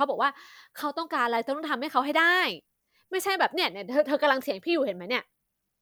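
No technical faults occur at any point in the speech.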